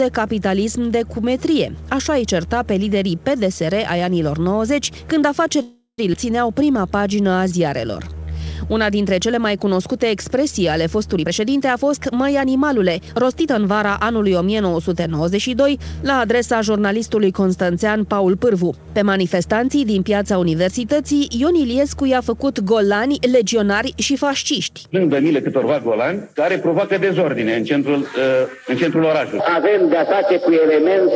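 From 5.62 to 6.00 s the sound stops and is replaced by a fading buzz that trails into about 100 ms of silence. Then it resumes where it left off. This is a call audio freeze, likely caused by delayed packets draining the jitter buffer, which stretched the last sound over 363 ms.

At 6.12 to 6.15 s the audio jumps forward with almost no gap, and roughly a third of a second is missing. This skip ahead dropped a stretch of audio that was already waiting, joining both sides nearly directly.

From 6.54 to 8.46 s the sound drags at about 86% speed with unchanged pitch, and some sounds are held longer than they should be. In this jitter buffer slow-down, the receiver repeated single pitch periods to add 268 ms of audio and rebuild its reserve.

From 11.17 to 13.48 s the audio runs hurried at about 115% speed, again at the same pitch. This is a jitter buffer speed-up. The receiver cut short pitch-period pieces, around 0.4 s in total, to shed excess buffered delay.

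Throughout the clip, nothing is heard above 8 kHz, which fits the G.722 call codec at 64 kbps.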